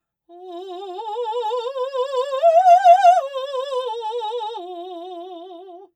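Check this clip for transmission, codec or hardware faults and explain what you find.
One fault runs through the whole piece of music: a channel delay, heard as comb filtering. One channel arrives roughly 5 ms behind the other, and when the two are summed to mono, everything they share cancels at regularly spaced frequencies. The first notch falls around 100 Hz, with further notches about every 200 Hz above it, which leaves the music hollow and phasey. A spectrogram shows this as fixed dark horizontal stripes that stay in place for the full duration.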